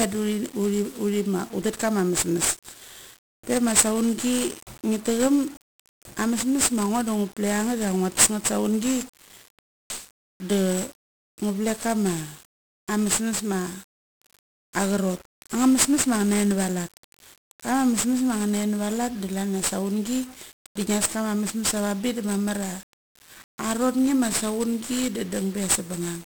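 From start to finish the speech carries 1-bit DFPWM compression. Each sample keeps a single bit that nudges an adaptive level up or down. The result is heavy broadband noise. Everything sounds fuzzy and crackly, treble sinks into hiss, and the damage fits a 48 kbps stream.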